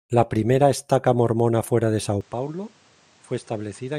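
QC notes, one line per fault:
2.21–3.98 s, input switched to a poorer device: abrupt gapless change to a duller sound with nothing above 9.2 kHz, level down around 10 dB, new noise floor roughly 30 dB below, likely a narrower-band microphone.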